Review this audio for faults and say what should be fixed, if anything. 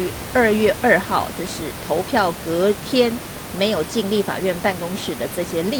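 Nothing stood out on listening that would need fixing.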